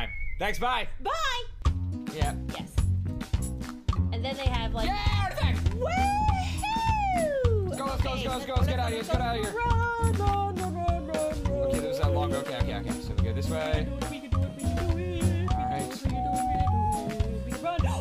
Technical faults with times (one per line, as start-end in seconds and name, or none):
none